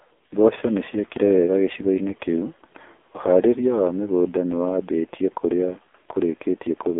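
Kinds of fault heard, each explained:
AMR narrowband mobile codec: the speech is squeezed into a 250 Hz to 3.5 kHz phone band with nothing above 3.6 kHz, and sounds heavily buzzy and synthetic, fitting a low 5.9 kbps mode. A plain low-pass filter would dull it without this robotic roughness.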